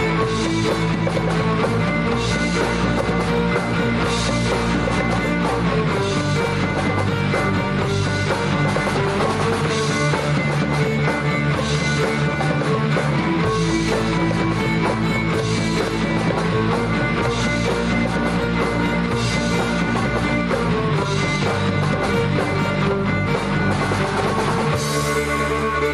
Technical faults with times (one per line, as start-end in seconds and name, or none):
none